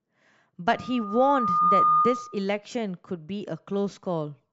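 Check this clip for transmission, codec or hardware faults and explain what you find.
Loudspeaker feedback squeal runs from 0.67 to 2.45 s. A microphone is picking up the loudspeaker it drives, and at 1.2 kHz the round-trip gain of that loop exceeds one, so the tone reinforces itself on every pass. It swells over roughly a second into a steady whistle that ends up around 10 dB louder than the speech, sitting on top of it until it stops at 2.45 s.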